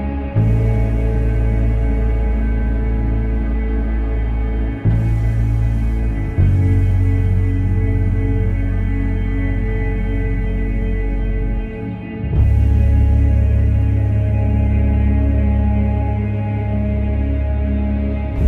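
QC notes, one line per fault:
No faults found in this clip.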